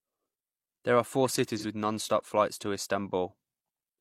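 Speech. After "are four", 1.59 to 1.65 s shows AAC frame loss with concealment. The decoder refills the 43 ms gap from the previous spectrum, leaving a smeared, phasey blur.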